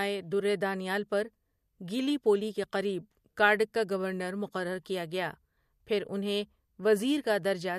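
No technical faults are audible.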